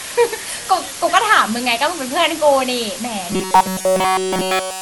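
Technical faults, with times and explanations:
throughout: low bit depth with dither. A steady, even hiss sits only about 10 dB below the speech, consistent with roughly 5-bit resolution. Dither has turned the rounding error into smooth white noise, so there's constant hiss without the gritty distortion that undithered truncation would add.
throughout: generation loss. The speech sounds swirly, hollow and smeared, with blurred consonant attacks. This is likely repeated lossy re-encoding, around seven passes consistent with MP2 at 96 kbit/s. Each pass adds its own noise and spectral holes, causing more damage than a single encode would.
3.32–4.81 s: robotic sound from repeated short buffers. The speech becomes a rigid metallic buzz at 188 Hz through to the end, with essentially everything heard being repeats. The likely cause is about 5.3 ms of audio being looped while real audio is skipped. 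Unlike a dropout, there's no silence, just a fixed pitch.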